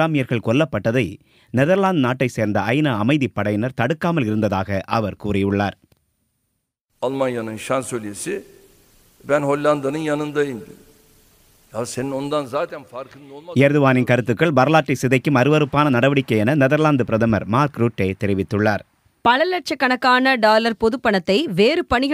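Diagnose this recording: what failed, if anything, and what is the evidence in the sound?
Nothing failed, and the sound gives no evidence of a fault at any stage.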